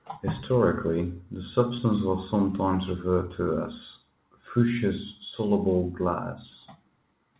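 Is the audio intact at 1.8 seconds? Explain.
No. Short concealed packet loss spans 1.76 to 1.80 s, just before "was sometimes referred to": 20 ms of missing audio was synthesized from preceding sound, leaving a brief smear.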